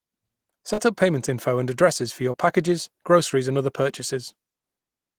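Short concealed packet loss occurs twice. From 0.73 to 0.80 s, just before "up payment info and", about 40 ms of the speech never arrived in time. The decoder extended the preceding sound for around 42 ms and crossfaded back, leaving a brief smear. At 2.32 to 2.36 s, between "and addresses for your" and "packages groceries and other", a 20 ms gap was filled the same way, heard as a short wobble.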